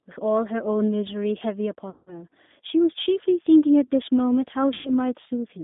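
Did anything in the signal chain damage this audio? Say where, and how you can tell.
Yes. G.729 codec damage throughout, at the codec stage: sound is confined to 200 Hz–3.7 kHz with a rough, synthetic texture, which fits 8 kbit/s model-based coding.

VoIP packet loss concealed by the speech codec at the network stage, 1.90–2.22 s and 4.74–4.91 s: the decoder stretches its last frames into a fading tone or coloured noise, then recovers slowly.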